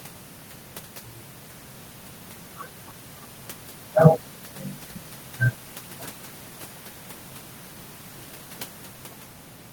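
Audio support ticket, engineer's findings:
No faults found on listening: the speech signal runs steady with no dropouts, level jumps, distortion or timing problems at any point, so no component needs action.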